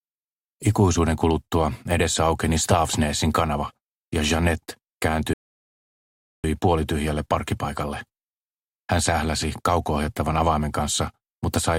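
At 5.33 s the player's buffer runs dry: it has played everything downloaded so far and must halt until more audio arrives. The result is a rebuffering stall, a sudden cut to silence lasting until 6.44 s. When playback resumes, the sound picks up exactly where it broke off, with nothing skipped or repeated. No content is lost, but the gap adds about 1.1 s to the running time.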